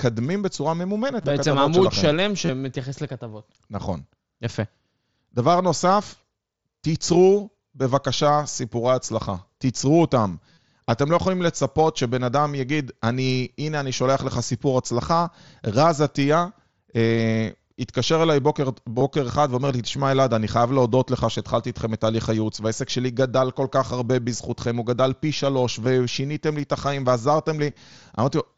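Concealed Bluetooth headset packet loss: voice packets from the headset dropped, and the phone patched each gap by repeating recent waveform. Short buzzy held tones sit at 1.22, 2.46, 10.53, 18.99 and 27.70 s, each with a slight warble as real speech resumes, while the tiny 25.85 s gap is nearly hidden.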